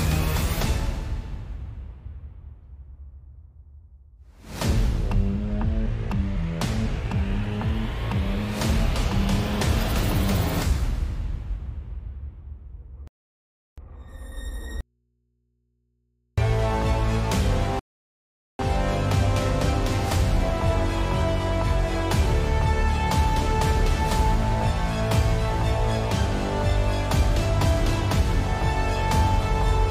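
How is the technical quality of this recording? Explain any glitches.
The recording has three interruptions between about 13 and 19 seconds, from two different faults.

Rebuffering stall, at 13.08 to 13.78 s and again at 17.79 to 18.59 s. Playback halts in clean silence for 0.70 s and then 0.80 s, and the sound picks up exactly where it left off. The player emptied its buffer of downloaded audio and waited for more data to arrive. No material is missing, but the pauses add about 1.5 s to the running time.

Audio dropout to a faint residue, from 14.81 to 16.38 s. The sound cuts out abruptly for 1.57 s and returns just as suddenly, with no fade at either edge. During the gap only mains hum remains, roughly 50 dB below the normal signal level. The likely cause is a loss of the wanted signal upstream while the input stage after the break stayed live and picked up hum from the open connection. 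Unlike the stalls, this section of audio is lost rather than delayed.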